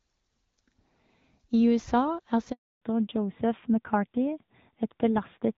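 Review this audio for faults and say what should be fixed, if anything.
Handover gap, 2.52 to 2.82 s: the speech fades out within a few tens of milliseconds and stays silent for 300 ms while the call moves between networks. Unlike a packet dropout, it ends with the audio resuming on a different codec. Make-before-break handover, which holds the old link until the new one carries speech, would prevent it.

Fallback to narrowband, 2.82 s to the end: everything above 4 kHz disappears and the speech becomes duller and rougher. Before the gap, the lightly coded HD Voice carried the higher frequencies. This points to an AMR-NB link at around 7.4 kbit/s, and a plain low-pass filter would remove the treble without adding this coarseness. Keeping HD Voice available on both networks would prevent it.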